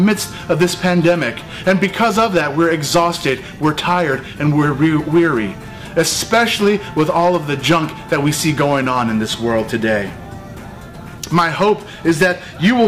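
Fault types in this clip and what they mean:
Hard clipping: peaks overdriven by about 10 dB are cut flat throughout, adding high harmonics heard as crackle on around two percent of samples.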